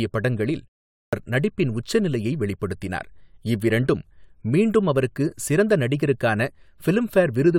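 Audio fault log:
0.96–1.13 s, clipped start after a pause: The sound resumes after a 0.36 s pause, and its opening is missing. About 167 ms is cut off, so "நடிப்பின் உச்சநிலையை வெளிப்படுத்தினார் இவ்விரண்டும்" begins abruptly, without its first sounds. The output device has gone idle during the silence and needs time to wake and lock again. Playback restarts only once it is ready.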